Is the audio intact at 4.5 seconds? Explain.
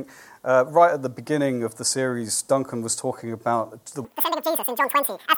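No. At 4.5 seconds the sound is racing along at twice its proper speed and a full octave too high; this runs from 4.05 s to the end. It's audio read two samples at a time (double speed): the reader treats each pair of consecutive samples as one frame, as if the stream had two channels or double-width samples, so it plays at double speed and any strong content above a quarter of the sample rate folds back.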